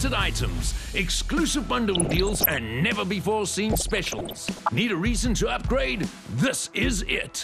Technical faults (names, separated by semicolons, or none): MP2 compression; DAB burbling